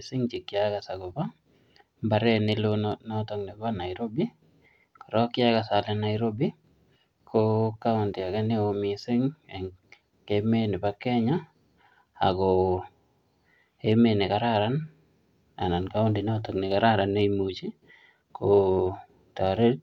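The speech recording contains no audible technical faults. There is nothing to mark at any point in time.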